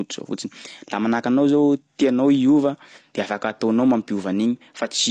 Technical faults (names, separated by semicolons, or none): AAC compression